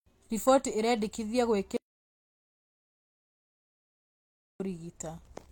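At 1.77 s the speech cuts out mid-flow into dead silence, with no room tone at all, until it snaps back at 4.60 s. That's an audio dropout to silence, about 2.83 s gone, likely a lost input while the recorder kept writing silence.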